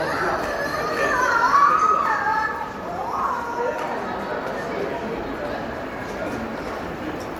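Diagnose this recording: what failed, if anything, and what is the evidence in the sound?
Swirly, hollow and smeared throughout, with blurred attacks, which points to codec-stage generation loss, likely repeated MP3 re-encoding, around four passes, consistent with roughly 96 kbit/s.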